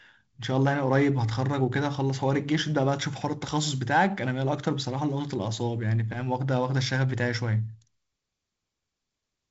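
No technical faults are audible.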